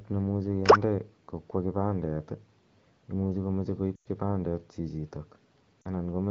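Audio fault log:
3.95–4.07 s and 5.82–5.88 s: lost AMR speech frames. The AMR-WB decoder stood in for missing frames by repeating the last good pitch and vocal tract settings at falling gain. The 0.1 s gap sags to near silence, and the shorter 0.04 s gap briefly drops toward silence.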